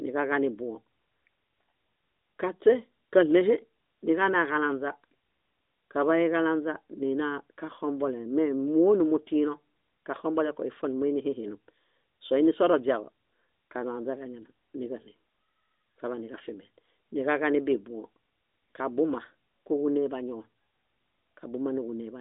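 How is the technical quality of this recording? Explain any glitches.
No glitches or faults can be heard anywhere in the recording; the speech comes over an AMR narrowband mobile codec path, limited to roughly 250 Hz to 3.7 kHz with only light coding texture, which fits the 12.2 kbps mode.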